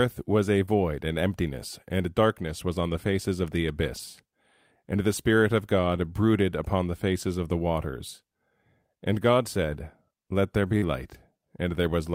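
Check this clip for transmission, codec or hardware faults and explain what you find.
Yes, there are faults, all from network packet loss on the call, in three flavours.

Right near the start, from 0.65 to 0.69 s, there's a short concealed packet loss. About 20 ms of audio never arrived in time, so the decoder papered over it by extending the sound just before, carrying on its pitch or shaped noise, then crossfading back. You hear it as a tiny smear or wobble, and a quick consonant in there can just disappear.

Twice, at 3.97 to 3.99 s and again at 7.21 to 7.23 s, a single lost packet was rebuilt from error correction. Each time, the next packet carried a low-bitrate backup copy of the missing 20 ms, Opus-style in-band FEC, so there's no gap. Those frames come out a bit rougher and noisier.

Last, from 10.77 to 10.84 s, there's a burst of packet loss. Roughly 40 ms of real audio is gone, covered by concealment that holds the last sound and fades it down, so you get a held buzz or a dying hiss. 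The final 20 ms of that stretch, 10.82 to 10.84 s, was recovered from an FEC copy, so it comes back rough before the clean audio resumes a bit further along.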